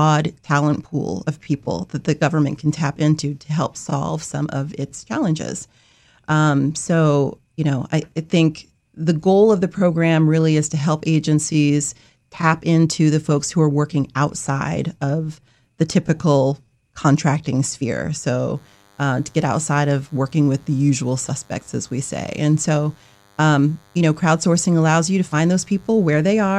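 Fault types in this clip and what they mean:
DECT cordless phone buzz: a thin, steady buzz at 100 Hz, rich in harmonics, comes in at 18.56 s, right after "the typical contracting sphere", and sits well below the speech until the end. It comes from a nearby DECT handset or base station whose radio bursts, repeating every 10 ms, are rectified by the audio circuitry.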